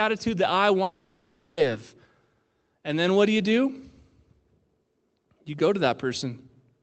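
A long network dropout runs from 0.83 to 1.59 s, right after "that I". The sound stops arriving and, for the whole 0.74 s gap, the receiver stretches the last fragment into a fading buzz or hiss rather than silence. Speech then resumes with that stretch missing, likely lost packets. Throughout, the top end is limited to about 8 kHz, consistent with a call codec.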